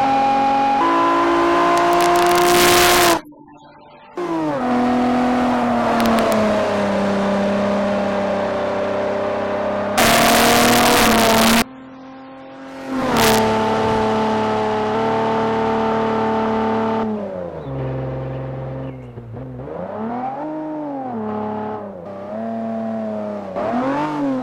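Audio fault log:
1.78–3.13 s, 6.00–6.32 s, 9.98–11.62 s, 13.17–13.38 s, integer overflow: loud passages pushed the signal about 3 dB, 1 dB, 4 dB and 3 dB past full scale, and instead of being held at the limit each excess peak wrapped round to the opposite extreme. That full-range jump produces violent cracks, harsher and more abrupt than clipping, which only flattens peaks into a buzzy distortion. It is mildest in the brief 6.00 s burst and most severe from 9.98 s.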